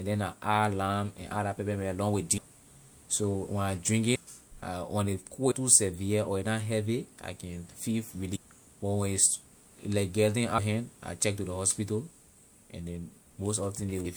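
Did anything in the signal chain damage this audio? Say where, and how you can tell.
Yes, at the codec or storage stage: compressed frames skipped at 2.37 s (after "pepper mint along with"), 4.14 s, 5.50 s (between "when ley" and "too severe or a"), 8.35 s, 10.57 s (before "hand I check to") and 14.04 s. Each time the speech jumps ahead by roughly 150 to 400 ms, in steps that fit frames of about 26 ms. The join is a short smeared blip from overlapping frames, not a hard click or a silent gap, which sets it apart from a buffer dropout.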